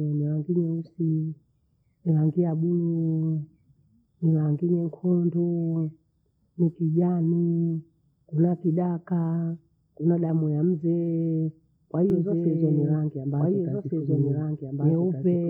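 From 12.1 s, after "kuna damu ya muzee", a doubled audio track echoes the speech about one and a half seconds late at equal loudness, likely a second, slower capture path.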